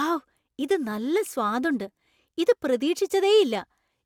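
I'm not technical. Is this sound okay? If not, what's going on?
Yes, no faults are audible in this speech recording.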